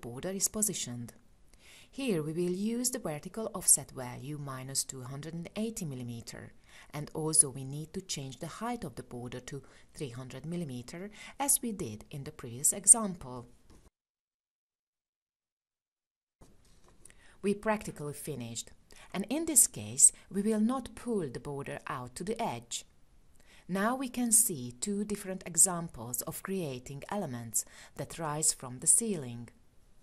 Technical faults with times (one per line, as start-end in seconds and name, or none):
none